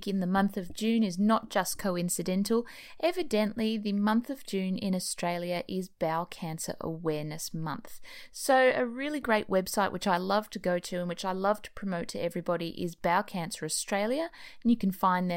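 Nothing technically wrong can be heard in this speech recording, with the signal holding steady and intact throughout.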